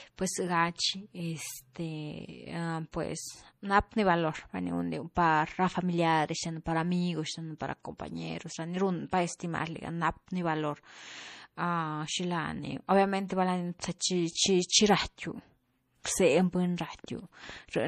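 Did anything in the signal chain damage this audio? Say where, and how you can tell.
Yes. The codec stage damaged it. The speech sounds watery and swirly, with metallic chirps on s sounds. Nothing remains above 15.1 kHz. This is likely MP3 compression at a low bitrate, near 40 kbps. Weak frequency lines drop in and out between frames.

Pre-echo appears at 16.04 s, also from the codec. A short hiss of about 16 ms comes just before a sharp attack, and the attack sounds smeared. The block's quantisation noise was sized for the loud onset and spilled into the quiet before it.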